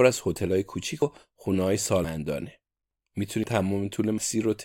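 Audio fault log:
1.02, 2.04, 3.44 and 4.18 s: dropped buffer (overrun). At each of these four points the speech jumps abruptly, with no gap of silence, as if roughly a tenth of a second has been cut out and the edges spliced together. The likely cause is that the recording software fell behind and the hardware overwrote a block of samples before it was collected. That discarded chunk is what is missing at each join.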